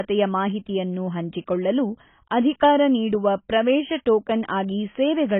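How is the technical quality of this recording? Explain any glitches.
Pretty rough, honestly. The whole speech clip is band-limited and smeary, with nothing above 3.8 kHz. That's likely heavy AAC compression, consistent with AAC-LC at around 16 kbps, leaving a dull, watery, warbling texture throughout.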